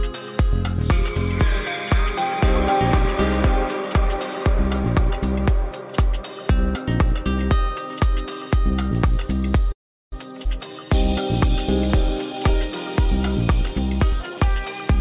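At 9.72 s the audio freezes. A gap of about 0.4 s follows, lasting until 10.14 s. Almost all of it, 0.38 s, is silence, with only a brief trace of the last sound carried over first. Then the audio resumes exactly where it left off, and nothing is lost. This is a call audio freeze. The likely cause is packets held up in transit. The jitter buffer ran dry, and the receiver could only fill the wait.

Just after, from 10.44 to 10.47 s, comes a skip ahead. Playback jumps forward with almost no gap. About a tenth of a second of audio is gone, and the two sides are butted together. The delay built up by the freeze was probably still sitting in the buffer. Dropping a chunk is how the receiver caught up.

From 10.67 to 10.86 s there is a jitter buffer slow-down. The audio runs at 81% speed, but the pitch does not drop. The receiver repeated single pitch periods to add 45 ms and rebuild its reserve. 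The result is a short stretch that sounds drawn out. There may be a faint warble where the repeated cycles meet.

Near the end, from 14.13 to 14.95 s, there is a jitter buffer speed-up. The audio runs at 116% speed at unchanged pitch. Short slices of one or a few pitch periods were cut out, removing roughly 150 ms. The buffer held more audio than its target, so the receiver trimmed the excess. It sounds hurried.

Throughout, the call codec keeps everything below 4 kHz. Its sound points to G.711 A-law at 64 kbps.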